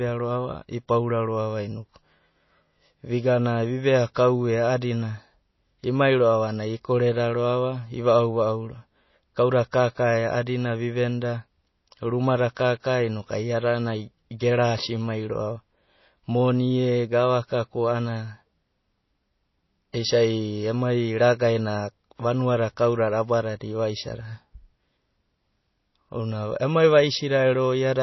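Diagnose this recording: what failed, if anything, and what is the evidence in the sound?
The codec stage failed: the speech has very likely gone through heavy MP3 compression, with audible damage throughout the whole recording. There is nothing above 5.8 kHz, which is the encoder's fixed treble cut. The s sounds have a watery, swirling quality because weak frequency lines drop in and out from frame to frame. The consonant onsets are smeared. A bandwidth this narrow points to a starved setting around 24 kbps.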